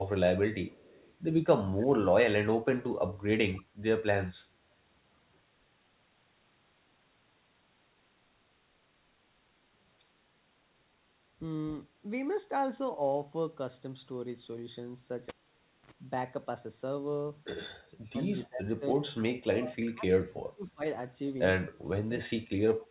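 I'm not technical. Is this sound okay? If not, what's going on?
No, there are three problems in this speech recording.

Echo leak: one person was most likely on a loudspeaker, and their echo filter failed to fully filter out the sound its microphone picked up, so some of it came back down the line. From 0.67 to 1.14 s, and again briefly at 22.8 s, you can hear a very faint copy of the voice trailing about a quarter of a second behind the original.

Cable pulled and plugged in: at 15.29 s a connected cable came out and was pushed back in. You hear a pop, then the sound drops to near silence for just over half a second, then a short burst of low electrical hum from the mains, and another pop at 15.91 s when the sound comes back.

Speech suppressed in double talk: both people were most likely talking at once, and the echo filter could not tell the talker apart from the loudspeaker sound, so it turned everything down. 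From 18.46 to 20.83 s, and again from 21.7 s to the end, the voice dips sharply, at its worst almost to nothing.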